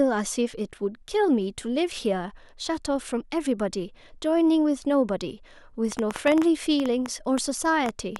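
A speech recording carrying a train of clicks from 5.92 s to 8.17 s, about fifteen near-identical ticks arriving at an uneven pace averaging 6.25 per second and peaking roughly 10 dB above the speech. Because the pulses keep their shape and persist through pauses, they come from outside the signal rather than from clipping or codec crackle, which track the speech itself. Likely cause is interference from nearby equipment or a faulty connection or power supply.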